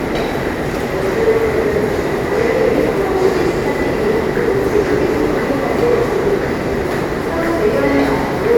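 No audible technical faults.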